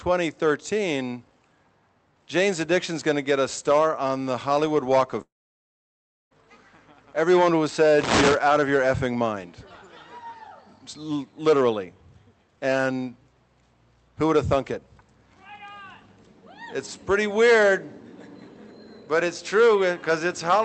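From 5.21 s to 6.33 s the sound cuts out, and the likely culprit is a long network dropout. The last bit of audio gets smeared into a short fading buzz, then there's roughly a second of near-silence before things pick up again, with about 1.1 s simply gone. Over the call path, the top end stops around 8 kHz, which fits Opus at 32 kbps.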